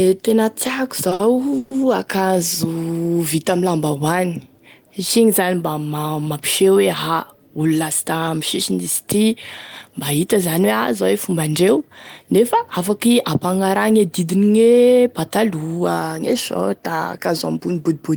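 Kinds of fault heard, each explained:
Short stall from a late packet: A packet arrived after it was due, so the receiver had nothing fresh to play and held the last sound a little longer. It happens twice in quick succession near 1.09 to 1.22 s and 1.13 to 1.21 s, stretching the speech by 20 ms and then 60 ms. Nothing is lost. The sound just lingers unnaturally, with a faint buzzy dip before the speech carries on.
Call audio freeze: Around 1.58 to 1.73 s the speech stops moving forward, and the last sound is drawn out as a fading buzz for about 130 ms. It never drops to silence. The likely cause is packets held up in transit that emptied the jitter buffer, with playback resuming from the same point once they arrived. A gap is inserted, but no speech goes missing.
Jitter buffer speed-up: From 12.23 to 13.15 s the speech plays at about 106 percent speed while keeping its normal pitch. This happens when the receiver holds more buffered audio than it wants after delays. 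It catches up by cutting many tiny slices, each a pitch period or so long. Roughly 70 ms is trimmed in total, so this stretch sounds slightly hurried.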